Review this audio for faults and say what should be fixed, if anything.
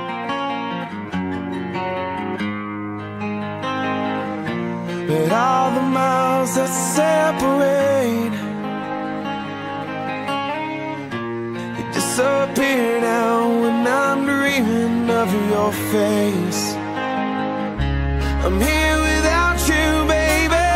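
Nothing needs fixing; no faults can be heard here.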